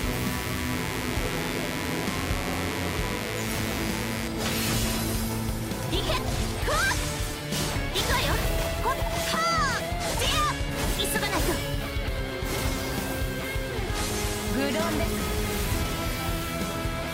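Mains buzz runs from 0.0 to 4.28 s: switching spikes twice per 50 Hz cycle leak in, spreading harmonics into the kilohertz range as a steady, raspy buzz about 10 dB below the sound.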